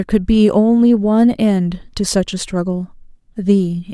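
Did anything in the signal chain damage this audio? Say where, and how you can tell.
No, no damage is audible.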